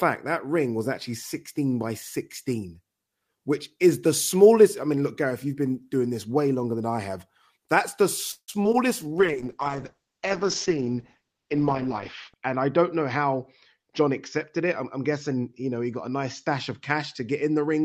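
At 8.31 to 8.50 s a call audio freeze stretches the last sound into a fading buzz, then about 70 ms of silence. Its likely cause is delayed packets draining the jitter buffer. The waveform shows a decaying tail before a flat gap, and 165 ms is inserted while nothing is lost.

Two short concealed packet losses follow, at 8.64 to 8.66 s and 8.72 to 8.75 s, covering 40 ms and 20 ms of missing audio. Each is a brief smear or wobble, seen as a blurred or repeated slice in the spectrogram.

At 9.04 to 9.32 s a jitter buffer slow-down repeats pitch periods to add 44 ms. The audio plays at 87% speed at unchanged pitch, and the spectrogram shows harmonics stretched horizontally.

From 9.19 s to the end, a call bitrate drop from 32 to 8 kbps makes the audio rough and muffled. The spectrogram's upper edge falls from 20 kHz to 8 kHz and stays at the lowest rate for 3.14 s.

Three jitter buffer speed-ups remove pitch periods: 12.69 to 13.34 s at 107% speed (around 50 ms removed), 13.76 to 14.09 s at 110% (around 40 ms), and 14.58 to 15.43 s at 106% (around 70 ms). 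The audio sounds hurried and its spectrogram features look compressed in time.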